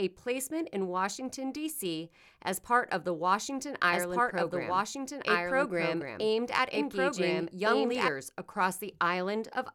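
It's a speech clip, and from 3.88 s to 8.08 s you get a doubled audio track: a second, full-band copy of the speech trailing about a second and a half behind at roughly the same level, cutting in and out abruptly with no decay, likely a slower second capture path.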